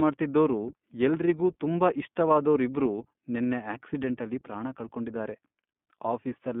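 From start to finish the speech sounds thin and boxed in, with nothing below about 150 Hz or above 3.5 kHz, and carries a plainly audible rough, synthetic edge. This is the iLBC codec, coding each short frame independently at a low rate that fits its 15.2 kbps mode with 20 ms frames.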